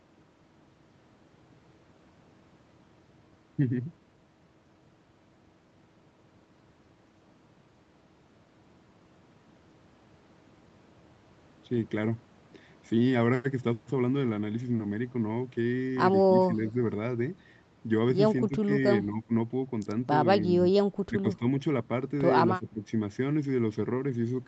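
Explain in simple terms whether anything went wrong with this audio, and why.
Several short breaks appear near the end. At 16.56, 18.47, 19.03, 20.39, 21.07 and 22.58 s the speech briefly dips or partly cuts out, each time for well under half a second. The deepest and longest breaks are around 19.03, 21.07 and 22.58 s. This is speech suppressed in double talk. Both sides of the call likely spoke at once, and the echo canceller could not tell the talker apart from the loudspeaker echo, so it turned the talker down too.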